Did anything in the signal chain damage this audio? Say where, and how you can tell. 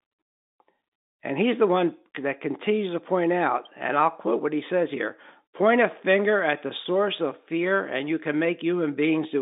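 No, nothing in the chain damaged it: this is speech carried over ordinary G.711 telephone coding, and the narrow band of roughly 200 Hz to 3.7 kHz with the faint level-following hiss is simply how that phone line sounds.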